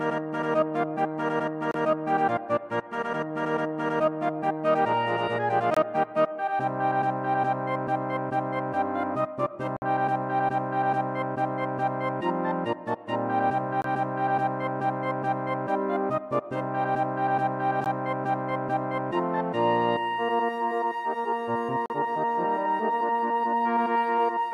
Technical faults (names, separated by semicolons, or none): gap between stream segments